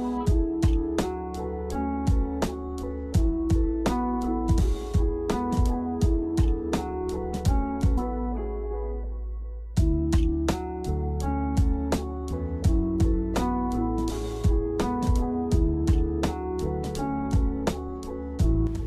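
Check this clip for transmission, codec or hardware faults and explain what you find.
One fault stands out. At 7.97 s there is a stream segment skipped. The sound jumps abruptly ahead with a brief blip. The likely cause is a segment of the stream that failed to load, so the player dropped that stretch and continued with the next.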